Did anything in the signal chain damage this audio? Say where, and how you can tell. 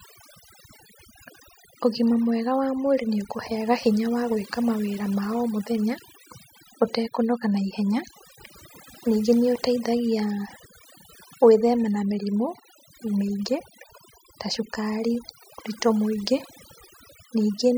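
Yes. Overdone noise removal runs through the whole speech clip, introduced by a noise suppressor set far too aggressively. Between phrases the background collapses to near silence scattered with twinkling, chirpy specks. Under the voice, individual frequency bands are pulled down or switched off whenever their level sits close to the suppressor's noise estimate. Quieter parts of the speech are stripped away with the noise.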